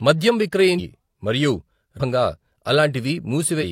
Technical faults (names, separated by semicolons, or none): damaged data in a compressed stream